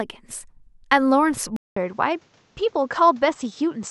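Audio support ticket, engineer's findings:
Speech dulls abruptly at 1.56 s and stays dull to the end. 200 ms dropout at the changeover. Nothing above 8 kHz afterwards. New faint noise floor, well below the speech. Level unchanged. Likely cause: input switched to a poorer device with narrower bandwidth.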